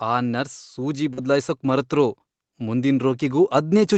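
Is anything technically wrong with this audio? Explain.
Yes, three kinds of fault are audible in this speech clip.

Automatic gain rising, from 0.05 s to the end at about 4 s: the gain control judged the input too quiet and kept turning it up, so the speech and the background noise swell together steadily across the whole clip.

Short concealed packet loss, 1.13 to 1.19 s: about 40 ms of audio arrived too late to decode, and the receiver filled the gap by extending the preceding sound before blending back. This is heard as a brief smear or wobble, and a short consonant can drop out.

Lost packet rebuilt from error correction, 1.17 to 1.23 s and 3.01 to 3.03 s: the lost packets, two at the first point and one at the second, were recovered from low-bitrate copies carried in the following packets. Playback has no gap, but those 40 ms and 20 ms stretches sound rougher and noisier. The call path's Opus coding, which cuts off everything above 8 kHz, stays the same throughout.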